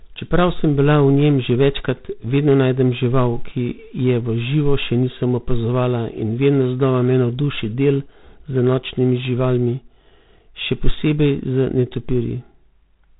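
From start to end the speech has passed through G.726 ADPCM coding at a rate that points to 24 kbit/s, so each sample carries only three bits describing its difference from an adaptive prediction. That coarse step size leaves plainly audible quantisation noise, heard as a harsh, rasping hiss that swells and fades with the speech level. The telephone band also removes everything above 3.8 kHz, leaving the sound narrow and muffled.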